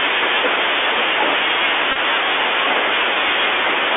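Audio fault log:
throughout: Bluetooth CVSD headset codec. The speech is confined to a telephone band of roughly 300 Hz to 3.5 kHz, consistent with a 64 kbps CVSD link in which each sample is a single up-or-down bit with an adapting step. Loud, bright sounds outrun that step and distort, sibilants turn scratchy, and a granular hiss sits under the speech. A plain band-limited phone line would be dull but clean. It would lack this grain and the slope-overload roughness.
1.92 to 1.97 s: Bluetooth headset packet repeated. Several lost voice packets, scattered over about 38 ms, were replaced by replaying the previous packet's bits, which fits roughly nine lost packets. In the longest stretch, around 20 ms, the 3.75 ms repetition produces a short buzz near 267 Hz before good audio resumes. A simple dropout would leave a silent gap or click. Here the sound is instead filled with a pitched, mechanical drone.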